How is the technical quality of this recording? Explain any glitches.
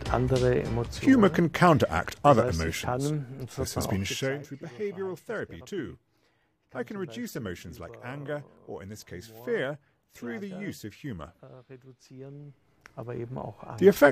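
No technical faults or glitches are audible anywhere in this recording.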